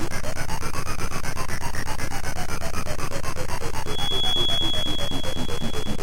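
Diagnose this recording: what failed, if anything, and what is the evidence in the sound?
A feedback whistle appears at 3.81 s and lasts to the end at 6.02 s. It is a thin, single-pitch 3.4 kHz tone, roughly ten decibels under the sound. The stage is acoustic and analogue. The likely cause is a loudspeaker-to-microphone loop held just at the edge of feedback.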